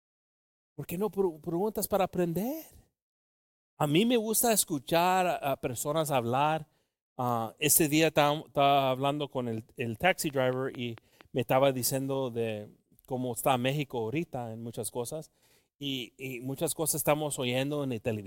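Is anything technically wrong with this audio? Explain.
Yes. From 10.30 to 11.22 s, between "hablando con el taxi" and "me estaba diciendo de", a train of clicks appears. Something, likely interference or a faulty connection, injects a pulse at a regular 4.4 per second, giving about five matching ticks roughly as loud as the speech.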